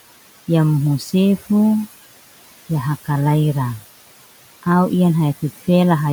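From start to finish, the room's background noise keeps shifting level. It drops away in the gaps between words and swells back up underneath them whenever speech is present. These are noise suppressor artifacts. The suppressor estimates which frequency bands hold steady noise and attenuates them frame by frame, here by about 17 dB. The room noise sits about 17 dB below the speech, and the noise floor pumps in step with the talking.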